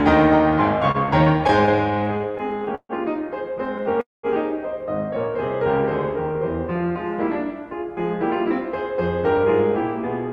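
Music, carried over a call path whose codec cuts the highs above about 12 kHz, with three delivery faults. From 0.91 to 2.92 s there are repeated stalls (stutter): 19 brief holds, the longest 143 ms, filling about a fifth of that span. Late-arriving packets keep draining the jitter buffer, and a spectrogram shows the music smeared into short flat horizontal streaks. At 3.83 to 3.88 s, a short stall from a late packet holds the sound for 19 ms, visible as a tiny stretched sliver in the waveform. From 4.01 to 4.26 s, a call audio freeze inserts 225 ms of the last sound fading out and dropping to silence for 180 ms. It appears as a flat gap in the waveform and a blank column on the spectrogram, likely because packets were held up in transit before the music resumes where it left off.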